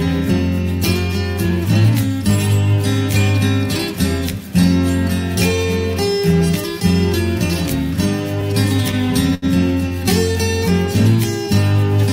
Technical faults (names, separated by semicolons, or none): short stall from a late packet